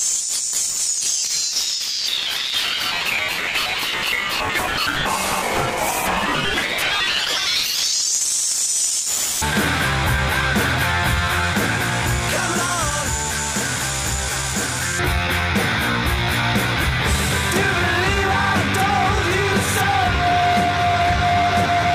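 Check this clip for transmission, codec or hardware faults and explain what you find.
Nothing stands out here; no transmission, codec or hardware problems can be heard anywhere in the clip.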